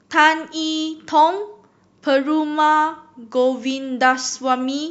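Speech recording in which no technical fault can be heard anywhere in the signal.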